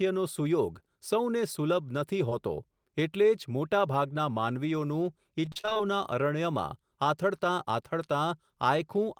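At 2.29 to 2.33 s there is a short concealed packet loss. About 20 ms of the signal failed to arrive in time, and the decoder covered nearly all of it by extending the preceding sound before easing back into the real audio. It comes across as a single brief smear rather than a silence. Because it is one isolated patch and not a cluster, the speech around it carries on without the choppy, mechanical quality of a sustained dropout run.

From 5.45 to 5.81 s, just after "મોટાભાગના માનવીઓનું", the speech turns robotic through repeated packet loss. The sound points to about nine separate holes packed into that third of a second, none longer than about 28 ms, and roughly half the stretch is synthetic fill. Each hole is patched by repeating what came before, and the next one follows almost at once. The result is a choppy texture with pieces missing. What separates this from the earlier single smear is the rapid recurrence, which gives the choppy rhythm.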